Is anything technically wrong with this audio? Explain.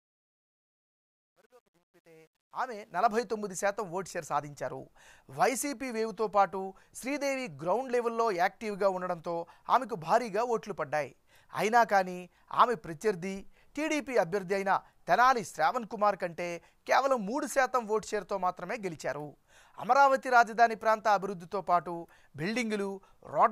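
Yes. There is truncation distortion on a fade at the start of the clip, from 0.0 to 3.18 s, while the sound fades in. The fade stage keeps too few bits and adds no dither, which fits a 10-bit stage. At low levels the waveform collapses into a few coarse square steps. It is worst from 0.0 to 2.54 s, where the quiet start sounds gritty before the level builds.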